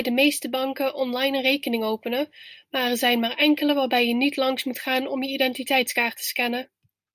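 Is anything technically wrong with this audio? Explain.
No, nothing technically wrong stands out here; the speech comes across steady and intact the whole way.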